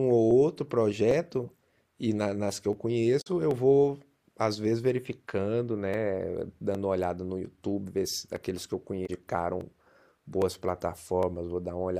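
A regular click runs through the speech from 0.31 s to 11.23 s, recurring every 0.81 s, about fifteen in all. These are likely clock drift buffer slips: two devices on independent clocks, differing by roughly a thousandth, let the buffer between them drift until a small block of a few dozen samples is dropped or repeated.

From 3.18 to 3.27 s, and again from 9.03 to 9.10 s, a brief glitch cuts into the sound. Both come from damaged data in a compressed stream: corrupted frames that the decoder misreads, losing sync while it searches for the next valid frame header.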